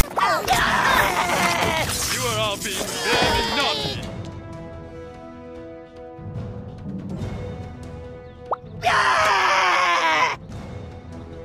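File tags played as audio occupy the opening 0.00 to 0.03 s. A block of metadata at the head of the file was decoded as if it were sample data rather than skipped. Because the block holds text, its byte values come out as a harsh, loud rasp pushed off to one side of zero, and the zero padding that follows reads as a short stretch of silence. The result is a hard-edged burst of static that starts the instant playback begins and cuts off abruptly before the real audio.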